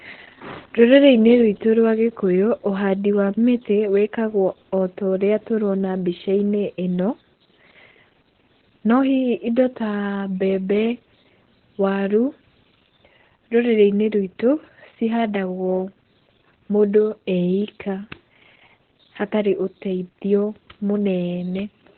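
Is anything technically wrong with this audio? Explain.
Yes. The whole speech clip carries heavy Opus voice compression damage. The sound points to the SILK linear-prediction mode at a very low bitrate, around 8 kbps, running narrowband with 20 ms frames. Nothing is present above about 4.2 kHz, so consonants lose their crispness. Because the excitation is coded coarsely, the speech comes out muffled, hoarse and slightly robotic.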